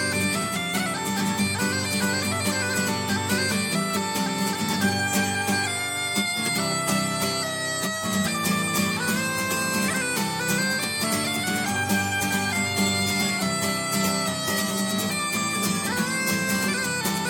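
No technical faults can be heard anywhere in this audio, and the signal holds steady throughout.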